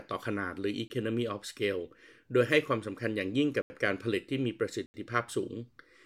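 Speech with three blocks of digital silence: 20 ms at 0.88 to 0.90 s, and 80 ms each at 3.62 to 3.70 s and 4.86 to 4.94 s. The signal drops abruptly to silence and back, which points to output buffers not being filled in time.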